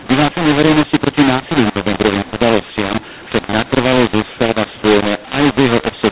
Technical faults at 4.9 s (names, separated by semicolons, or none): mu-law and A-law mixed up